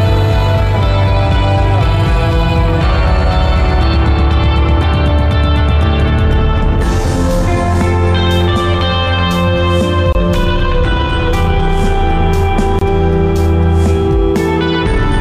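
A gap at a join of encoded pieces opens at 10.13 s and again at 12.79 s, each a gap of about 24 ms with smeared edges. Separately encoded segments were butted together untrimmed, leaving encoder delay and end padding in place, before the sound resumes where it stopped.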